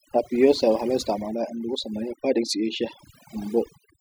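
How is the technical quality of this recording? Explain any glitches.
The recording suffers from overdone noise removal, running the whole way through. A noise reduction stage was set too aggressively, cutting individual frequency bands down to nothing wherever they sat close to its noise estimate, so the background drops and breaks up into twinkling specks while the quiet parts of the speech are cut away with it.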